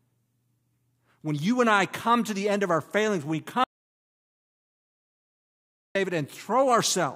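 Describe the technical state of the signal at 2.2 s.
The signal at 2.2 s is intact, with no technical fault audible at that moment.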